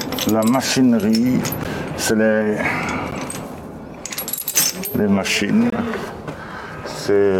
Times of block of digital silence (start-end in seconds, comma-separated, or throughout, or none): 1.64, 3.11, 4.39, 5.70-5.72